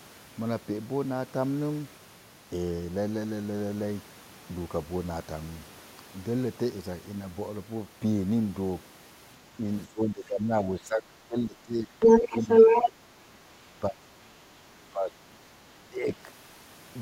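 It's a speech clip with echo-canceller trouble through the back half. From 9.87 to 12.0 s there's speech suppressed in double talk, with the talker dipping by about 15 dB, then again briefly at 12.31 s and heavily from 12.9 to 16.12 s, down about 25 dB. That's likely the canceller ducking everything while both ends talk at once. Between 12.0 and 12.91 s the other side's voice leaks through, a second voice coming through at about 10 dB relative to the talker, most likely far-end audio from the loudspeaker that the canceller didn't fully remove from the mic.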